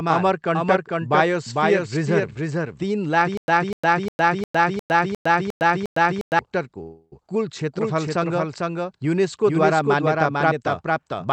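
From the very start the speech has a doubled audio track under it: a second full-band copy trailing roughly half a second behind, about 5 dB quieter than the main signal. It has no decay or room colour, so it isn't an echo off walls. It's the same recording laid in twice, out of step, which likely comes from the audio being captured again through a slower path or an edit keeping two copies misaligned.

Right after "बायोस्फियर रिजर्भ तिन लाख", from 3.37 to 6.39 s, you get a stutter with silent gaps. A 248 ms fragment plays, then 107 ms of dead digital silence, then the same fragment again. It repeats eight times on a steady 355 ms cycle. That's the sound of a player or stream stalling and likely replaying its last buffered chunk on each retry before running dry, and whatever should have played in that stretch is gone.

Shortly after, at 6.82 to 7.13 s, there's a call audio freeze. The last sound is stretched into a fading buzz or hiss for about 295 ms, with roughly 20 ms of true silence. 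Packets were likely held up in transit, the jitter buffer emptied, and the receiver papered over the wait. When they arrived the speech resumed where it stopped, so nothing is lost, just delayed. The call leg itself tops out around 8 kHz, which fits an Opus link.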